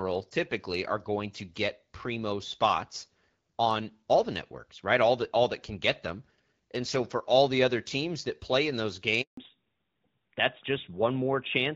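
At 9.21 s the speech cuts out for 160 ms, until 9.37 s. This is a handover gap: the call was moved between networks and no frames arrived during the switch. Unlike a packet-loss glitch, there is no smeared or repeated sound, just a clean silence.

From 9.37 s to the end, a fallback to narrowband removes everything above 4 kHz. The speech loses the airy top it had over the light, clear wideband coding earlier, which fits a drop to AMR-NB, and it turns duller and rougher. A mere low-pass filter would not add that coarseness.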